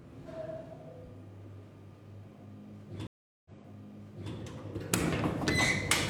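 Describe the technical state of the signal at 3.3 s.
At 3.3 s you're inside a stream reconnect (3.07–4.33 s): the link dropped, leaving about 0.38 s of silence, then a fresh decoder picks up 0.88 s earlier, so material repeats.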